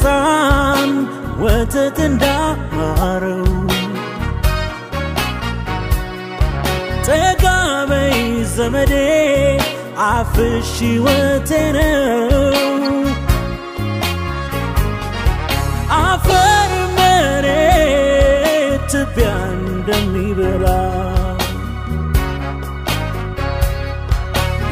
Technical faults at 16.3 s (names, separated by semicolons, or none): corrupt frame decoded